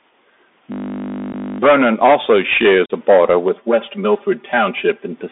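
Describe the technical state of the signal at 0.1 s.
At 0.1 s the speech is already passing through a Bluetooth CVSD headset codec, which runs for the whole clip. Each sample is a single up-or-down bit, with an adapting step. The band sits near 250 Hz to 3.6 kHz. Sibilants sound scratchy over a granular hiss.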